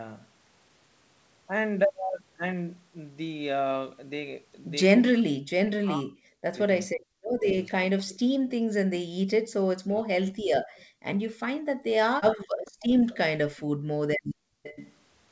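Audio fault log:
5.2–8.13 s, 9.77–10.47 s, 13.34 s: speech suppressed in double talk. The talker's voice sinks by around 40 dB (about 35 dB at 13.34 s), roughly two seconds in the first stretch. This is likely an echo canceller ducking both sides while the far end speaks. Unlike background gating, the voice itself is lost.
8.09–8.5 s, 10.26–10.85 s, 12.65–14.93 s: echo leak. A faint, delayed copy of the voice trails the original by about 438 ms in the first span and about 453 ms later, sitting about 25 dB and then about 20 dB below it. This is likely residual loudspeaker pickup that got through. It sounds like a distinct repeat, not a smooth reverberant tail.
8.41–14.63 s: background gated by the echo canceller. The room noise dips by up to about 37 dB, roughly 1.5 s in all, and comes back when the canceller releases. Only the ambience collapses, which separates this from double-talk suppression.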